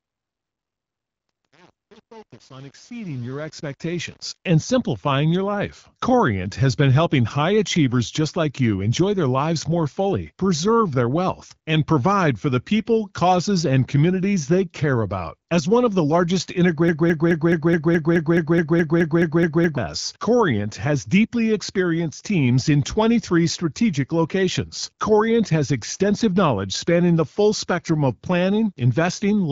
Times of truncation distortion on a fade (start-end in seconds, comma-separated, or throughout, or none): 0.00-4.49